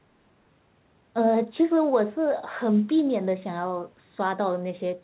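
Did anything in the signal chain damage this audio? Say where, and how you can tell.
Yes. At 0.5 s the speech skips ahead: roughly 0.7 s of audio is dropped at the jitter buffer or in transit, and the two sides join with no gap.

From 0.59 to 2.67 s the jitter buffer speed-up runs the speech about 7% faster at unchanged pitch, trimming pitch periods to shed roughly 150 ms of built-up delay.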